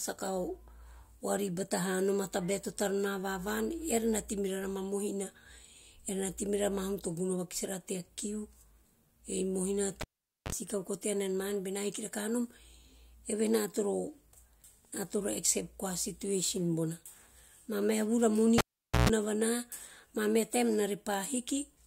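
At 10.01 s and 18.58 s, the cable is pulled and plugged in. Each time, a pop cuts the speech for about 0.46 s. Mains buzz sounds while the tip touches: 40 ms at 50 Hz, then 132 ms at 60 Hz. Another pop brings the sound back.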